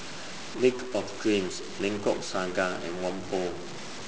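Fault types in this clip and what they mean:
Stuck bit: throughout the speech, a harsh, buzzy distortion rides on the signal and the pauses fill with steady noise. This is likely one data bit held fixed, so about half the samples jump by a step of about -35 dBFS.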